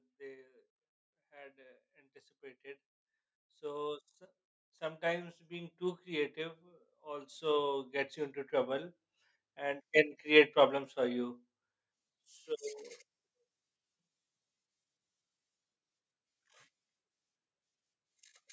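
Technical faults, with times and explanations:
0.17–4.11 s and 4.78–7.95 s, automatic gain rising: the gain control judged the input too quiet and pushed its level up slowly, by about 9 dB and then about 11 dB, so speech and background swell together. The waveform envelope ramps upward across each span, and the spectrogram brightens evenly at all frequencies below its 8 kHz ceiling from the call's microphone processing.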